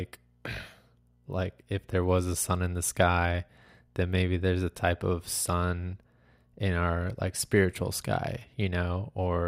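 No technical faults can be heard anywhere in the speech. There is no moment in the audio that calls for a time or an explanation.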